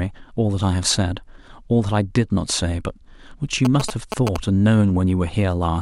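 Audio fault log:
3.65–4.37 s, GSM signalling bursts: a galloping dit-dit-dit of short buzzes cuts across the speech, only a little quieter than it. A nearby 2G phone is exchanging brief radio bursts with the network, and the audio circuitry rectifies them into a buzz pulsing at about 217 Hz. On a spectrogram this shows as evenly spaced vertical striations with harmonic lines stacked at 217 Hz multiples. The waveform shows clustered spiky pulse trains riding over the speech.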